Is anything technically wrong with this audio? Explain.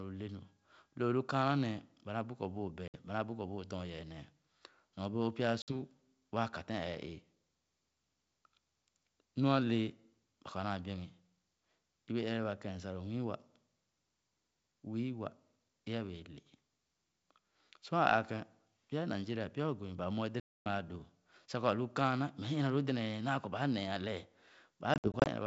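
Yes. Hard silent gaps, followed by brief distortion as the speech returns, occur at 2.88, 5.62, 20.40 (260 ms) and 24.94–25.28 s. This is packet loss on an ADPCM call: lost packets desynchronise the decoder's predictor and step size.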